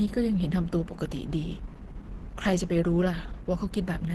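From start to finish the speech sounds muffled and hoarse, with a grainy roughness on sustained sounds and nothing above 12.1 kHz. The pattern points to Opus compression, likely in its hybrid mode, where a speech coder handles the lower band and band energy is only roughly kept higher up, at a rate that fits about 16 kbps. Unlike MP3 damage, there is less swirling or watery warble from spectral holes, more a steady coarse, band-limited dullness.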